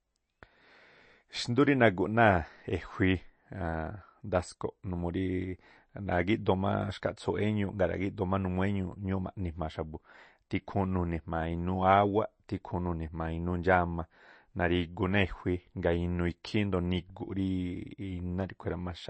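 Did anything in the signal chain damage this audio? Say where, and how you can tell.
Yes, at the codec stage, likely MP3 compression: throughout, the speech sounds watery with swirling sibilants, and a spectrogram shows a hard ceiling near 8.3 kHz, consistent with roughly 32 kbps.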